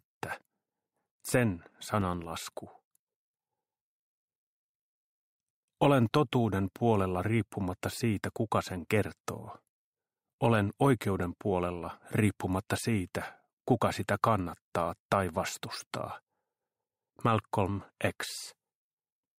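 A short burst of processor overload crackle runs from 2.01 to 2.24 s, a gritty tearing riding on the audio. The processor evidently fell behind its buffer deadlines several times in that window. Each miss drops a few milliseconds to silence with hard edges, and the pattern points to roughly five missed buffers of about 3 ms each. On a waveform these show as brief flat gaps with abrupt cut-offs. A spectrogram shows thin vertical broadband streaks at each edge, clustered within that quarter-second.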